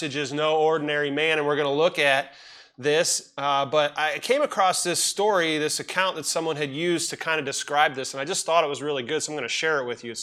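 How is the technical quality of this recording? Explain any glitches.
The recording has one technical fault: sample clock jitter from about 5.32 to 7.84 s. During that stretch the converter's clock wavers by something under a microsecond, so each sample is captured slightly early or late. Where the waveform changes fastest, that timing error becomes an amplitude error, roughly 40 dB below the signal. It is heard as a faint hiss or grain riding on the loud, bright parts and dropping away in quieter moments. A steady noise floor would stay constant, even through pauses.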